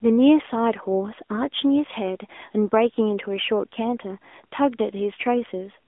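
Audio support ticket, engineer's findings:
AMR narrowband mobile codec across the whole clip. Speech is squeezed into a 250 Hz to 3.5 kHz line band, with nothing up top and a thin low end. Plainly audible codec damage: a coarse, synthetic edge from the pulse-driven vocal-tract model, which fits the 10.2 kbps mode.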